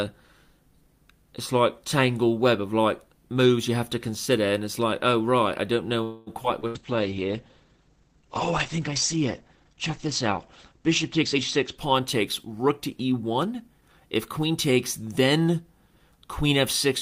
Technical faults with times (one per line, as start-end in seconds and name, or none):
6.03-6.30 call audio freeze
6.43-6.66 short concealed packet loss
6.67-6.78 burst of packet loss
6.73-12.98 call bitrate drop
11.22-13.82 jitter buffer speed-up